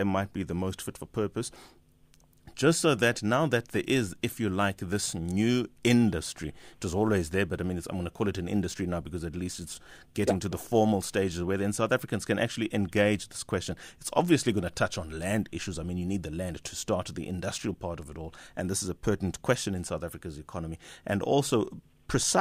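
After "just so that", from 3.41 to 11.41 s, sample clock jitter adds hiss and roughness to the speech. Timing errors of a few microseconds leave noise about 30 dB below the signal. It clears before "where then".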